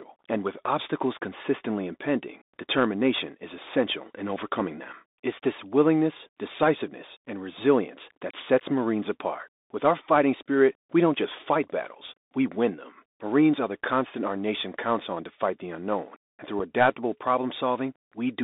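From the start, the speech carries the sound of a Bluetooth CVSD headset codec, narrowed to roughly 250 Hz to 3.7 kHz, which fits a 64 kbps CVSD link. A granular hiss sits under the voice and s sounds turn scratchy. Unlike a plain band-limited phone line, loud bright moments smear where the one-bit step size cannot keep up.

At 16.6 s there is unconcealed Bluetooth headset packet loss: about 7.5 ms drops out, consistent with a single lost packet. It sounds like a brief hard-edged hole rather than a smoothed-over glitch, and the speech returns momentarily quieter as the CVSD step size recovers.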